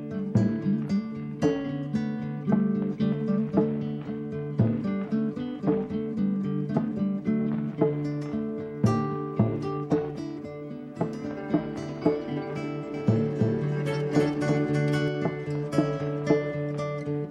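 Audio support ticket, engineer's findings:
Likely second capture path or out-of-step edit mixing audio in twice: doubled audio track, 12.94–15.08 s. Dry full-band copy trails by roughly 300 ms, somewhat quieter, starting and stopping abruptly.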